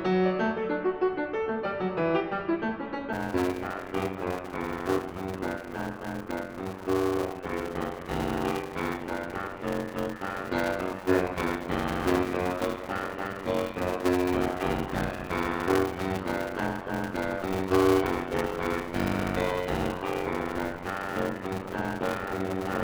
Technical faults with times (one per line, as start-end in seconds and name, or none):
3.12-22.83 block size mismatch (padded)